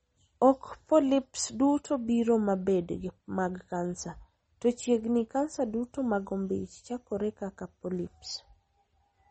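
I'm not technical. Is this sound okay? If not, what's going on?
No. MP3 compression damage runs through the whole clip. Nothing above about 8.3 kHz survives, so the speech sounds dull, with a watery, swirly edge, likely because a heavily squeezed encoder discarded treble and faint details to save space.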